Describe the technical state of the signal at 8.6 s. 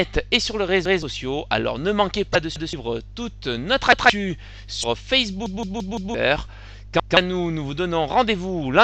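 At 8.6 s the signal is intact, with no audible fault at that moment.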